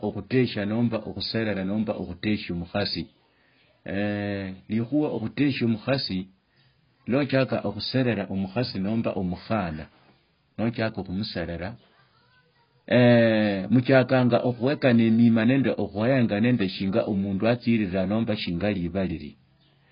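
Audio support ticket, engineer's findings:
Dull, smeared speech with warbly sibilants throughout; spectrogram shows a hard ceiling near 5.1 kHz. Likely AAC compression, heavy damage consistent with roughly 16 kbps.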